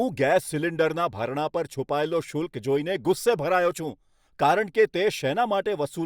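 A speech recording, and nothing is technically wrong with it.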